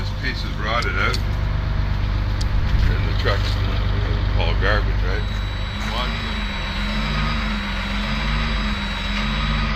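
From 5.05 s to the end, a feedback whistle sounds at 3.9 kHz, roughly 15 dB below the signal. A loudspeaker-to-microphone loop likely hovers at the feedback point.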